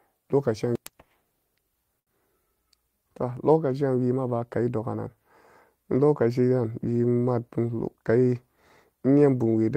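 A packet arrived late at about 1.99 s in this speech recording, so the jitter buffer ran dry and the receiver had nothing new to play. It filled the gap by stretching the last sound it had for about 73 ms, until roughly 2.09 s, then picked up exactly where it left off. The result is a short stall from a late packet: a sound held unnaturally long, with a faint buzz or dip, but no speech lost, and everything after it sits about 73 ms later than before. Near the end, from about 7.48 s to 8.04 s, the buffer was holding more audio than its target, so the receiver applied a jitter buffer speed-up, repeatedly cutting out tiny slices of one or a few pitch periods to shed around 70 ms of delay. Over that half-second the speech plays at about 110% speed while keeping its pitch, so it comes across as briefly rushed rather than higher-pitched.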